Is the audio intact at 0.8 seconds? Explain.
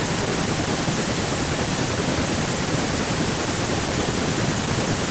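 Yes, the speech at 0.8 s is intact, with no fault at that moment.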